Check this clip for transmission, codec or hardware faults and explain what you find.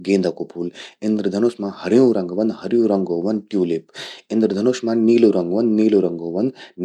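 No transmission, codec or hardware faults are audible anywhere in the recording.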